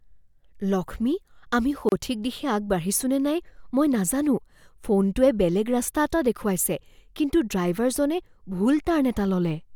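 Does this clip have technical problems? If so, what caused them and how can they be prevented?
Yes. A gap at a join of encoded pieces cuts in at 1.89 to 1.92 s, between "লক্ষ্মী আমি" and "দিশে আগবাঢ়িছো নে নাই": a 31 ms gap with smeared edges, left by encoder start delay and last-frame padding. Prevent it by trimming both before joining, or encoding in one pass.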